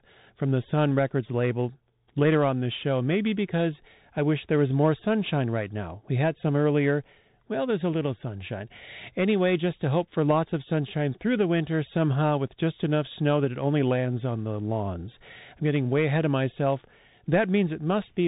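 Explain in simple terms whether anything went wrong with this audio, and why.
Something did go wrong: the speech has been squeezed through a Bluetooth CVSD headset codec for the whole 18 seconds. This is the old phone-grade headset link, which stores the sound as a fast stream of single up-or-down steps. Nothing above 4 kHz survives, so the voice sounds boxed-in and muffled. Loud, bright moments outrun the steps and distort, s sounds come out scratchy, and a grainy hiss sits under the talking throughout.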